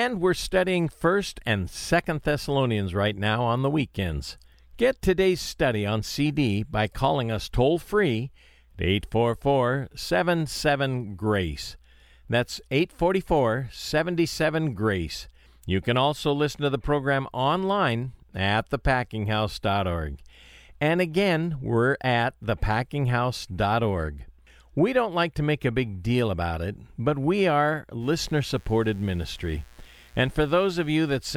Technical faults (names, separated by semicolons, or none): mains buzz